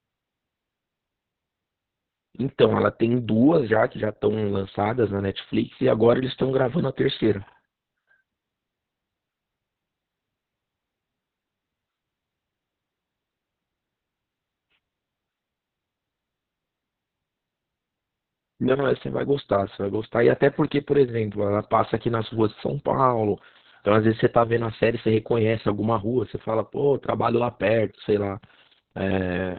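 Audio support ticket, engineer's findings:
Opus voice compression, whole clip. Encoder starved of bits, running SILK linear-prediction only in narrowband; sound points to roughly 6 kbps with long 60 ms frames. Band cut: nothing above 4.4 kHz. Excitation coded coarsely: speech muffled, hoarse, slightly robotic, with heavy codec damage. Probable component: encoder bitrate/bandwidth config. Fix: raise bitrate, allow wideband.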